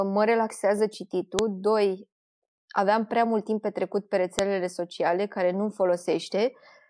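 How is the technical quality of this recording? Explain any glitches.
The recording is marred by two sharp, loud clicks in the speech. A file header is played as audio at 1.39 s and again at 4.39 s, between "mult timp petrecut pe" and "sociale care". The audio was joined from 3-second pieces without stripping each piece's header, so those few dozen bytes play as samples. Unlike random clicks or dropouts, these snaps land exactly 3 s apart, whatever the speech is doing.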